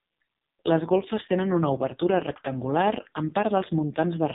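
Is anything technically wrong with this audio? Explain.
Yes. The speech runs through an AMR narrowband mobile codec from start to finish. The band stops dead at 3.8 kHz, and the heavy buzzy, synthetic quality points to the lowest-rate AMR-NB mode, around 4.75 kbps. At that rate the codec rebuilds each 20 ms frame from a vocal-tract filter excited by only a handful of pulses, so detail is lost. On a spectrogram there is a flat, empty ceiling above 3.8 kHz and the harmonics look smeared.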